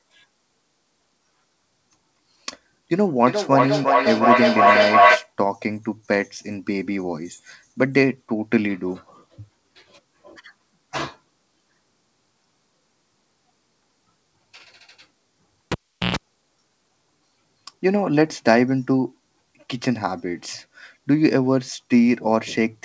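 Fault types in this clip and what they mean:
Feedback echo between two devices: From 2.93 to 5.33 s the sound comes back at a steady interval of roughly 400 ms, each pass thinner and more ringing. The returns build instead of fading, peaking about 5 dB above the direct speech. Two devices in one room are relaying each other's microphone, and neither echo canceller touches the other's output. A single-device echo or room reverb would give one decaying tail, not regular, growing repeats.
Cable pulled and plugged in: Between 15.72 and 16.16 s there is a pop, then near silence for about 397 ms, then a 60 Hz mains buzz lasting about 123 ms while only the plug tip makes contact, then a second pop as the sound returns. Network packet loss, even through this 8 kHz band-limited call path, would cause gaps or smeared concealment, but never the paired pops or the hum burst.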